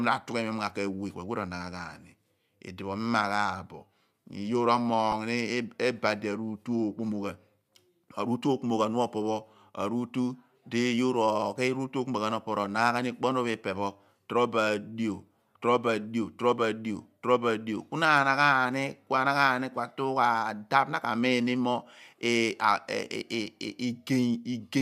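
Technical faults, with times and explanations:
5.12–5.14 s, lost LE Audio frames: a brief grainy smear replaces the sound, which fits one 10 ms frame dropped over the Bluetooth link. The decoder fills the gap by reusing the previous spectrum with randomised signs, so it sounds like noisy filler, not a click.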